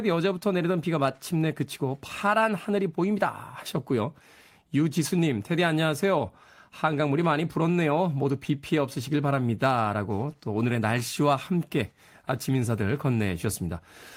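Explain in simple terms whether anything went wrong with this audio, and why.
Nothing went wrong; the speech comes through without any faults.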